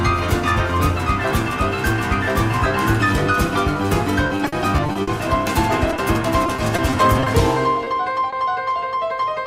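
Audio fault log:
4.27–5.09 s and 6.46–7.28 s: repeated packet loss (robotic sound). Choppy passages with pieces missing. Nine gaps hit the first stretch and six the second, none longer than 40 ms. Each was patched by stretching the preceding sound, leaving about 24% and 15% of these spans synthetic.
5.96–6.00 s, 7.84–7.88 s, 8.30–8.34 s: short concealed packet loss. Each is a brief smear or wobble where 20 ms of audio failed to arrive in time. The receiver bridged the hole by continuing the last sound, then blended back into the real signal.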